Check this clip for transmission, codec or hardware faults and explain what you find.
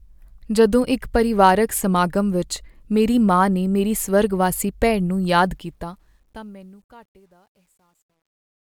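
The speech fade-out at the end of the clip carries truncation distortion. From 5.42 s to 8.67 s, as the level falls away from around five and a half seconds, the fade is computed at too few bits with no dither, which fits an 11-bit word length. The quietest part, 6.62 s to 8.67 s, turns gritty. On a waveform the tail shows flat square steps. A spectrogram shows a broadband hash.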